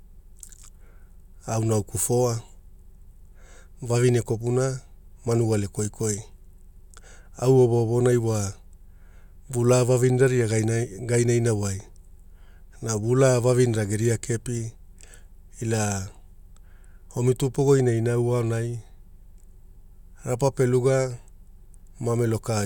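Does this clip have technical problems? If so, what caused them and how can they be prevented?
No, nothing stood out as a technical problem on listening to this speech recording.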